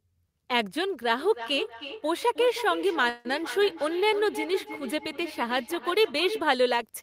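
A speech recording in which, from 1.19 to 6.57 s, each phrase comes back thinner and ringing at a steady interval of roughly a third of a second, peaking at about 11 dB below the speech. This is feedback echo between two devices: a second device in the room replays the call, and the first microphone picks it up again, beyond reach of its own echo canceller. Between 3.09 and 3.27 s the sound stalls into a fading buzz or hiss for 155 ms, then resumes exactly where it stopped with nothing lost. That is a call audio freeze, likely from delayed packets emptying the jitter buffer.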